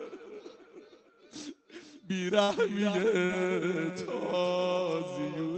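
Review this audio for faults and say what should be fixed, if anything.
A burst of packet loss runs from 2.43 to 2.51 s. Several consecutive packets arrived too late or not at all, so the receiver stretched the last received sound across the hole for about 50 ms, letting it decay into a held buzz or fading hiss. When real audio returns, roughly 40 ms of the original has been skipped, which is why the sound jumps forward.

Short concealed packet loss occurs from 3.25 to 3.32 s. Here a smaller gap was patched by continuing the preceding sound for about 39 ms, built from its pitch where it was voiced or from shaped noise where it was not, then crossfaded into the incoming audio. The result is a brief smear or wobble, and about 40 ms of the original is lost, enough to swallow a short sound entirely.

A larger jitter buffer, forward error correction such as redundant packets, and a more stable network path would prevent both.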